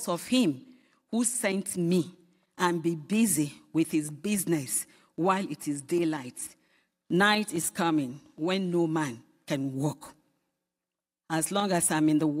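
No technical faults can be heard anywhere in the speech. Nothing interrupts or alters the sound at any point in the recording.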